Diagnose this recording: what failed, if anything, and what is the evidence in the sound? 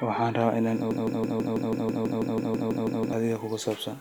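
After "rabaa inaan", a broken-record loop runs from 0.91 to 3.13 s. One 0.16 s fragment repeats exactly, fourteen times, replacing the audio due there. A spectrogram shows identical tiles every 0.16 s. The likely cause is a stalled playback buffer resending its last fragment.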